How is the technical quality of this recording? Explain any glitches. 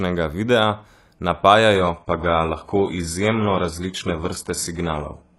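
The quality drops partway through. From 1.75 s to the end, this is an adaptive stream at a lower bitrate. The connection slowed, so the player switched versions with no gap. Treble stops at 11.5 kHz. Codec artefacts rise, which fits a very low-bitrate HE-AAC stream.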